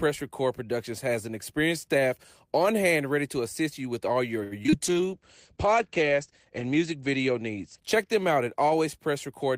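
Speech, with three faults clustered right after "you with all your". From 4.43 to 4.74 s there is repeated packet loss (robotic sound): four holes in quick succession, the longest 80 ms, with about 42% of that stretch concealed by extending the preceding sound. It turns choppy, with pieces missing. That separates it from a single concealed dropout, which would give one smeared spot rather than a rapid stutter.

At 4.91 to 5.07 s a jitter buffer slow-down follows. The receiver repeats single pitch periods to rebuild its reserve, adding 44 ms so that playback runs at 78% speed. The sound is drawn out at unchanged pitch. Unlike a tape-style slow-down, nothing drops in pitch, and unlike loss concealment, nothing is missing. The material simply stretches.

Overlapping the slow-down, a call bitrate drop runs from 4.86 to 9.09 s. The encoder falls from 32 to 12 kbps, sitting at its lowest for 1.62 s, and the audio bandwidth narrows from 20 kHz to 8 kHz. 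The result is a rough, watery, muffled tone. What marks it as a bitrate fault rather than a plain low-pass filter is the coarse, swirly texture that comes with the lost top end, and the way the sound stays continuous throughout.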